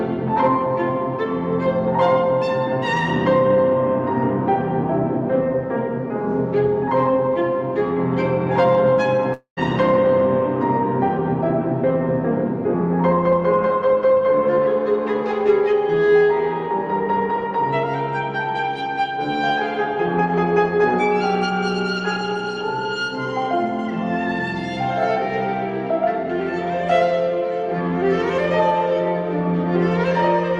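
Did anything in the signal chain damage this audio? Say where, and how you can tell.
Yes, at the network stage. From about 9.33 to 9.59 s there is a long network dropout: the sound smears into a fading buzz for roughly 0.23 s, thins to near-silence for about 0.11 s, then resumes with about 0.24 s simply gone. That fading continuation is a jitter buffer concealing packets that never arrived, likely from a network stall. A single lost packet would be patched in tens of milliseconds, and an edit or mute would cut off abruptly with no decaying tail.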